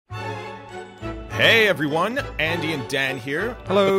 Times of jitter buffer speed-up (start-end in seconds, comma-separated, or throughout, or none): none